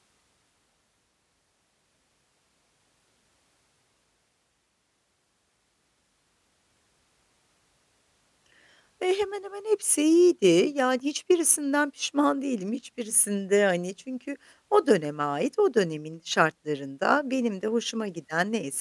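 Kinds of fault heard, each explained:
No technical faults can be heard in this recording.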